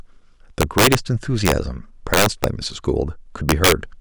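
Integer overflow at 0.61–0.95, 1.46–1.52, 2.14–2.44 and 3.49–3.72 s: speech peaks overdriven by about 7, 3, 6 and 4 dB wrap to opposite polarity, producing harsh cracks.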